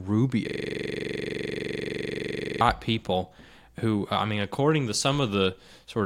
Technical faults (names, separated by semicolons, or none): system hang loop